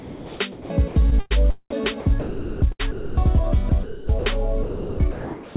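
Audio that's been through a narrowband call path, with nothing above 4 kHz, which fits a G.711-style link, and it's chopped by the voice detector three times: 0.00–1.32 s, 1.70–3.17 s and 3.69–4.25 s. In each of those stretches the sound keeps flicking out to a flat hiss and back, most likely because the sender's detector was toggling transmission on and off. Then at 4.63–4.99 s the sound is dropped by the voice detector outright, about a third of a second gone, likely because the detector took it for background and just stopped sending. From 4.63 s to 5.55 s you also get comfort noise in place of the background. The real ambience gives way to a smooth, featureless synthetic hiss, most likely generated at the receiving end to fill the transmission pause.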